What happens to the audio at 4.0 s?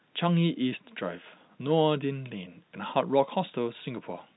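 Nothing goes wrong at 4.0 s; the speech carries on intact through that moment, heard through the narrow G.711 telephone band that leaves nothing above about 3.9 kHz.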